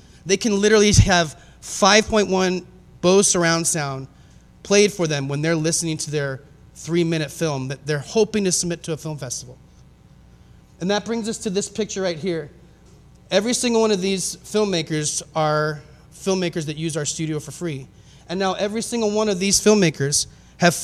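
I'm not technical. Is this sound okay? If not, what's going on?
Yes, nothing in this sound points to a technical problem. There's nothing here that needs fixing.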